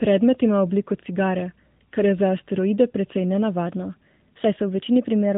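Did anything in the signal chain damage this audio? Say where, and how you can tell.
Yes. At the codec stage, the whole clip has been through AMR narrowband mobile coding. Nothing passes above 3.8 kHz, so the speech lacks upper presence and sibilance. The low-rate vocal-tract model with sparse pulse excitation leaves a plainly audible buzzy, synthetic edge on the voice, consistent with AMR-NB at a mid rate around 10.2 kbps.

At the buffer stage, from 3.67 s, right after "za asteroide precej", and continuing to the end of the clip, the audio plays about 6.2% faster and sits about 104 cents higher, roughly a semitone. Speed and pitch jump together at one instant, with no gradual slide. That pattern is likely a drift correction step, where clock-matching software abruptly changed the playback rate to drain or refill its buffer.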